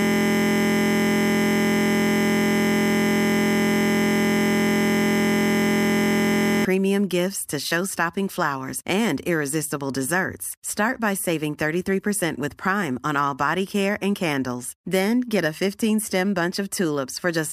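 A system hang loop runs from the start to 6.65 s, before "gifts to": a frozen driver replays one 23.22 ms buffer, fitting 1024 samples, as a steady 43.1 Hz buzz.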